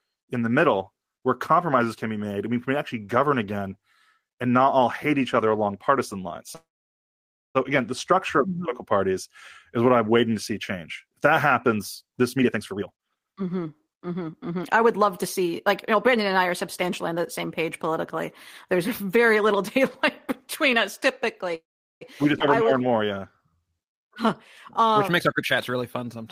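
From 6.55 to 7.57 s, just after "other along partisan lines", a call audio freeze interrupts the speech, likely because delayed packets left the jitter buffer empty. The receiver extends the last sound briefly, then about 0.91 s of silence follows before "again the structure of" resumes with nothing lost. The same fault returns from 21.55 to 22.03 s, a 0.46 s gap of which 0.39 s is silent.

From 12.36 to 15.53 s, after "that happens this", the buffer held too much audio, so the receiver repeatedly cut out pitch-period slices to reduce the delay. This jitter buffer speed-up removes about a second and plays the speech at 130% speed without changing pitch, so it sounds rushed up to "like you". A milder speed-up at 108% follows from 15.95 to 16.46 s, leading into "are substantially on the". Another runs from 25.16 to 26.23 s at 126%, trimming roughly 0.3 s.

At 22.39 to 22.42 s, a skip ahead drops roughly 0.1 s of audio. 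Playback jumps straight past it with almost no gap.

From 22.63 to 23.51 s, the buffer was short, so the receiver repeated single pitch periods to rebuild its reserve. This jitter buffer slow-down adds 123 ms and plays the speech at 87% speed, drawn out at the same pitch.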